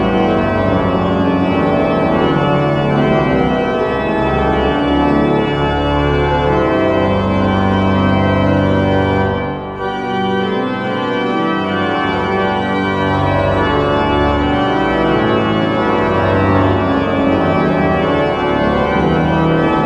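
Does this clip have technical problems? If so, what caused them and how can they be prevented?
No, this clip has no technical problems, so there is nothing to prevent.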